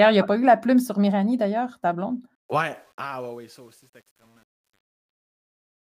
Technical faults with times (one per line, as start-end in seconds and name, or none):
2.35-5.87 truncation distortion on a fade